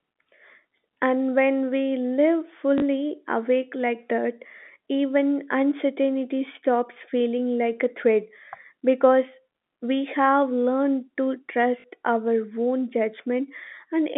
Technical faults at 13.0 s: none

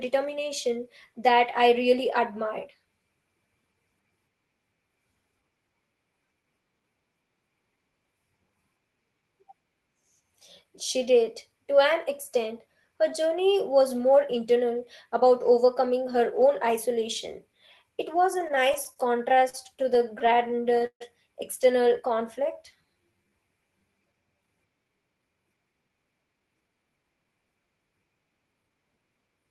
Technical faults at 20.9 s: repeated stalls (stutter)

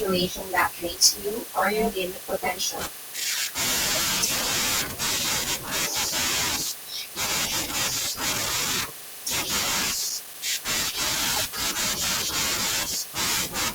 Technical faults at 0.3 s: none

